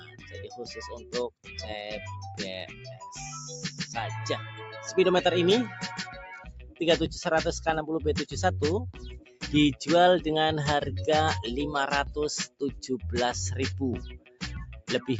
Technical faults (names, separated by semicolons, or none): noise suppressor applied to music or sounds; sound cut by the noise suppressor